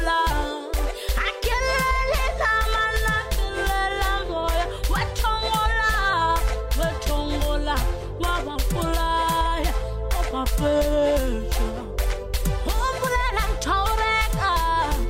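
At 9.83 s a corrupt FLAC frame breaks in, and the damage runs to 10.31 s. Flipped bits sent the decoder's prediction astray across what sounds like several consecutive frames, and clean sound snaps back at a frame boundary, unlike a gradual dropout or clipping.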